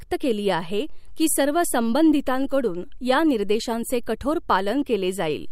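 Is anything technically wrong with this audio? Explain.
No, nothing is technically wrong with this audio.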